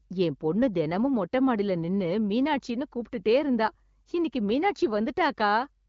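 No technical faults occur at any point in this speech.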